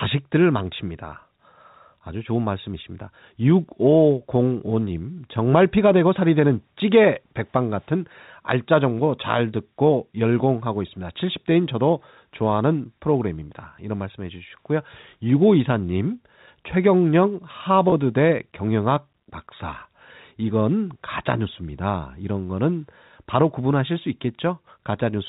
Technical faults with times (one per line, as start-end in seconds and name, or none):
17.90-17.92 packet loss with pitch repetition
24.62 packet loss with pitch repetition